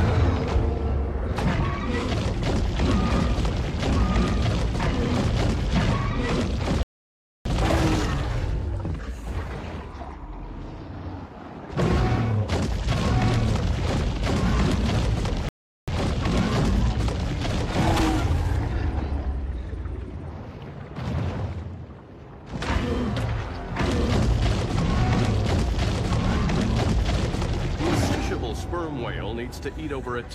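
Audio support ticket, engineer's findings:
Rebuffering stall at 6.83–7.46 s and 15.49–15.88 s. Audio drops to silence, then resumes exactly where it stopped, with nothing skipped. About 0.62 s and 0.39 s added. Player buffer underrun: playback outran the download and waited for data.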